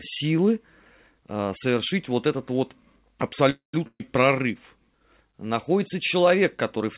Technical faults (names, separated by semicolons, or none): call audio freeze; burst of packet loss